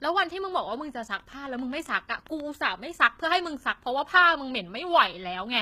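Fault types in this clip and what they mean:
HE-AAC compression: gritty, metallic treble and lispy s sounds throughout, unlike plain dullness, likely from band replication at a bitrate near 20 kbps.
train of clicks: about ten similar, evenly spaced ticks, 7.47 per second, from 1.20 to 2.41 s, about as loud as the speech, unlike random crackle.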